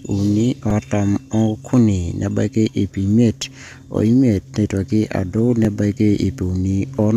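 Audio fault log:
0.70 s and 5.65 s, repeated buffer: a piece of about 5 ms plays again, twice extra at 0.70 s and once extra at 5.65 s, because fresh audio arrived late. With a buffer this short, the repeats sound like a tick or tiny buzz rather than a stutter, and no audio is lost. On the waveform, identical 5 ms segments sit back to back with abrupt steps at each join. A spectrogram shows a thin vertical broadband streak at each time.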